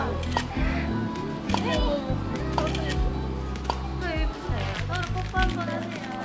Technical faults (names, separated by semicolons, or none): none